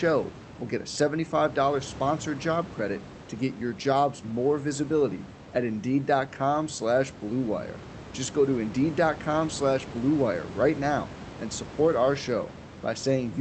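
No technical faults can be heard anywhere in this recording.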